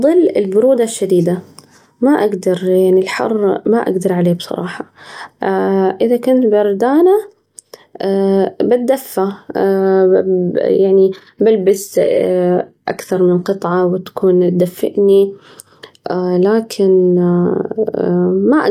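At 11.6 s the speech drops abruptly in quality and stays that way until 13.6 s, just before "وتكون تدفئني". That's an adaptive stream switching to a lower bitrate after the connection slowed. There's no gap, just a sudden shift. The top end goes thin, with nothing above 14.9 kHz, and the codec artefacts get busier. It sounds like a drop from roughly 96 kbit/s AAC to something near 20 kbit/s HE-AAC.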